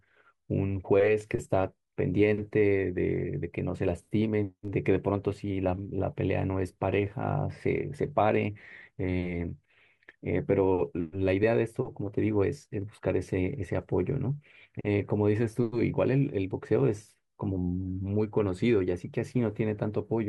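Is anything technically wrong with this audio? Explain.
No, nothing is technically wrong with this speech recording. There are no faults to point to at any moment in it.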